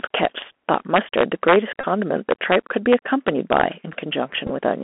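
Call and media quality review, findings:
Bluetooth CVSD headset codec, whole clip. Speech band-limited to about 250 Hz to 3.4 kHz. Scratchy sibilants, granular hiss under speech, clearly audible. Points to 64 kbps CVSD on the headset link. One-bit up/down delta coding at 64 kHz lets loud high-frequency content outrun the adaptive step. Distinct from a plain narrowband phone codec by the grainy hiss and slope-overload roughness on loud highs.

Integer overflow, 0.14–1.56 s (about 5 dB over full scale), 2.31–2.55 s and 2.92–3.61 s (about 2 dB over). Violent cracks on loud peaks. Probable fixed-point gain or mixer stage with wrapping instead of saturating arithmetic. Samples past the limit flip to the opposite extreme. Harsher and spikier than clipping, which flattens peaks into dull buzz rather than full-range jumps. Worst in the first span.

Bluetooth headset packet repeated, 1.81–1.85 s. 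About 26 ms lost, which fits roughly seven 3.75 ms packets. Steady buzz near 267 Hz from the last packet being re-decoded in a loop. Second event 4.47–4.51 s, about 22 ms lost scattered over 30 ms, longest run around 15 ms. Shorter buzz and ticks. A tonal buzz, not a silent gap, sets it apart from a plain dropout.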